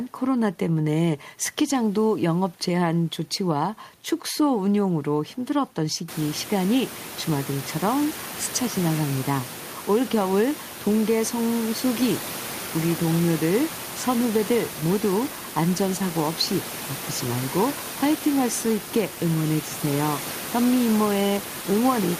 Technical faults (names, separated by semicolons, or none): none